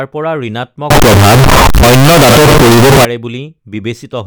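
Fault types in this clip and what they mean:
Float read as integer: from 0.90 to 3.05 s the speech turns into a loud, harsh, near-square waveform sitting at an almost fixed, high level, with background noise as loud as the speech, though pitch stays traceable; likely 32-bit float samples decoded as 32-bit integers.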